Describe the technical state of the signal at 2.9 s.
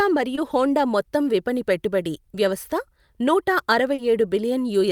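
At 2.9 s the signal is intact, with no audible fault at that point.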